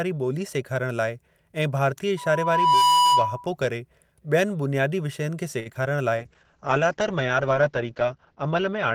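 From 2.17 to 3.48 s, a loudspeaker feedback squeal rises. A pure tone near 986 Hz swells over about 0.7 s. It peaks at about 5 dB above the speech, as the mic-to-speaker loop runs away.

Just after "विषयनि खे", at 5.59 to 5.68 s, there is a short stall from a late packet. The last sound is held about 62 ms. Nothing is lost, but everything after it arrives slightly late.

Short concealed packet loss follows at 5.74 to 5.77 s and 5.83 to 5.97 s. Each gap of about 20 ms is patched by extending the previous sound. These patches are heard as brief smears, and the second adds a little extra length.

From 6.19 s to the end, a call bitrate drop makes the speech coarse and watery. The top end is cut at 8 kHz, down from 20 kHz. The sound suggests a fall from about 40 to 8 kbps, holding at that low rate for roughly two seconds.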